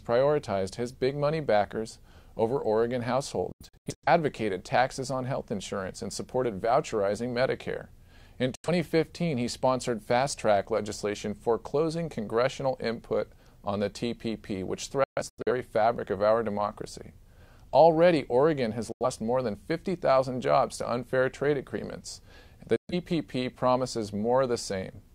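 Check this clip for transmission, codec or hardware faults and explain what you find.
Five digital broadcast dropouts occur, at 3.52–4.08 s, 8.55–8.69 s, 15.04–15.52 s, 18.92–19.05 s and 22.76–22.94 s. The receiver mutes corrupted frames behind 3 ms fades, leaving abrupt silent holes, with 85–300 ms lost per dropout. The first and third dropouts break into several scattered gaps.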